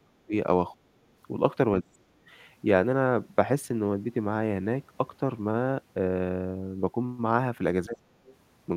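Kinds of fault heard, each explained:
Speech suppressed in double talk: the talker's speech drops sharply in short pieces, around 0.03, 0.75, 1.82 and 7.86 s, by roughly 25 to 40 dB, likely from echo-canceller overlap.
Other side's voice leaking through: a faint second voice surfaces briefly near 8.3 s, roughly 30 dB below the speech, likely residual loudspeaker echo the canceller missed.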